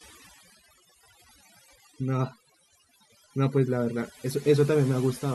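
Overdone noise removal runs through the whole speech clip. A noise reducer set far too aggressively has switched off individual frequency bands near its noise estimate, taking quiet speech detail with them. The background drops and breaks up, speckled with twinkling artefacts. On a spectrogram the gaps show as scattered isolated dots and a patchy, hollowed-out speech spectrum.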